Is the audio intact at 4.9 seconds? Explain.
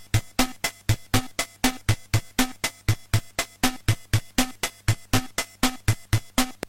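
Yes, the audio is intact at 4.9 seconds, with no fault audible at that moment.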